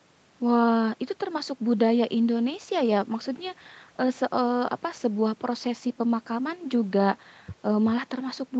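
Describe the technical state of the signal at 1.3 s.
At 1.3 s the speech is intact, with no dropout, click or distortion, only the ordinary call-path band limit that leaves nothing above about 8 kHz.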